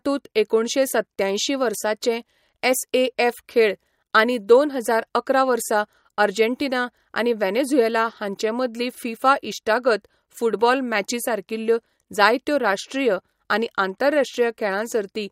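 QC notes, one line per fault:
No faults heard anywhere in this speech recording.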